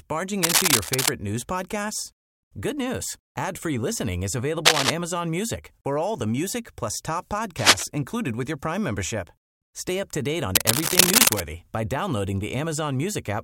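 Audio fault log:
0.43–1.11 s, 4.65–4.90 s, 7.57–7.84 s and 10.55–11.41 s, cable scratch noise: four bursts of dense, ragged scratching about 5–10 dB above the speech, first just before "news podcasts", then after "listening is" and between "the music plus top" and "included with your". Likely a worn cable or connector being jostled, its contact resistance jumping around.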